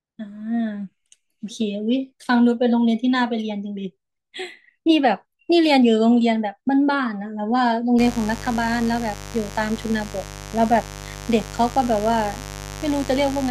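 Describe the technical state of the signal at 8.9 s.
At 8.9 s a steady, raspy mains buzz sits under the speech, around 15 dB below it. It starts at about 7.98 s and runs to the end of the clip. Sharp switching spikes from a dimmer, a rectifier or an unshielded line are getting into the signal path twice per cycle of the 50 Hz supply. That fills the spectrum with 50 Hz harmonics stretching up into the kilohertz range.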